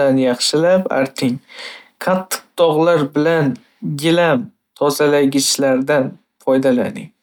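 No technical faults can be heard anywhere in the speech recording; the signal stays steady and intact throughout.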